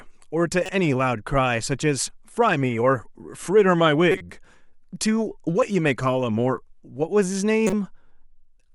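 Corrupt frames decoded at 0.66–0.71 s, 4.12–4.21 s and 7.67–7.73 s: flipped bits led the decoder to rebuild a few frames with wrong gains and codes, spraying energy at stray frequencies. Each is a brief chirpy noise burst, peaking around -20 dBFS first, then louder, near -10 dBFS.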